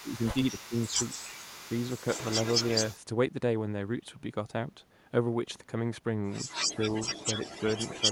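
From the start to 2.95 s a second copy of the speech trails the original by 280 ms, roughly 10 dB quieter, giving a hollow doubled sound. This is an echo leak: the far end is likely playing the call on a loudspeaker, and its echo canceller let part of that pickup back into the line. The echo returns from 6.47 s to the end, now 232 ms behind and roughly as loud as the speech itself, so the doubling is much harder to ignore.

Overlapping these passages, the speech sags and thins in short patches while the echo is present. Between 0.01 and 0.99 s about 0.4 s of it drops by as much as roughly 10 dB, and a brief dip of about 5 dB comes at 1.64 s. Later the same happens from 6.55 to 6.79 s, a shallow dip of about 5 dB, and from 7.14 to 7.56 s, with drops nearing 10 dB. This is speech suppressed in double talk. The likely cause is that the echo canceller could not tell the talker apart from the loudspeaker echo while both were sounding, so it turned both down together.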